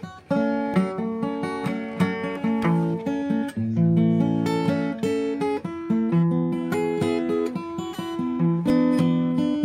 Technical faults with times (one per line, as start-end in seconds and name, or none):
0.74 dropped buffer (overrun)
8.70 dropped buffer (overrun)